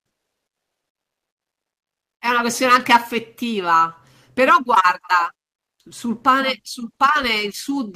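From the start to 2.21 s, the sending side appears to have stopped transmitting during the pause before speech, likely because of Opus discontinuous transmission, leaving the receiver to generate comfort noise in place of the background. For those 2.21 s the real room sound, which sits about 68 dB below the loudest part of the clip, is swapped for a smooth, featureless hiss with no detail, about 13 dB quieter.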